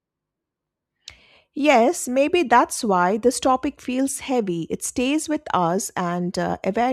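Nothing stood out as a technical fault on listening to this speech recording.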